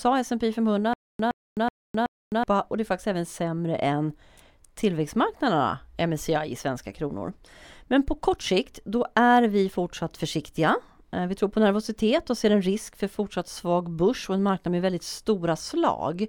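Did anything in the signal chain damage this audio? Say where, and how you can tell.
Yes. From 0.93 to 2.44 s there is a stutter with silent gaps, just before "och det är faktiskt". A 116 ms burst of speech repeats four times, each followed by 259 ms of digital silence, every 375 ms. The likely cause is a stalled playback or stream buffer replaying its last fragment, losing the audio in between.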